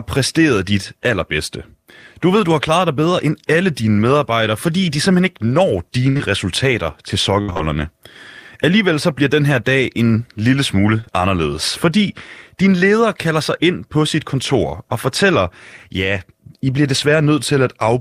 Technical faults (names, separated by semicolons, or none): burst of packet loss; short concealed packet loss; repeated packet loss (robotic sound)